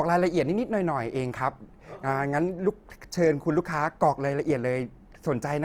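A speech clip with Opus compression damage throughout. The voice sounds grainy, rough and noisy, with band energy kept but detail smeared. This likely comes from a low-bitrate, full-bandwidth encode, near 24 kbps.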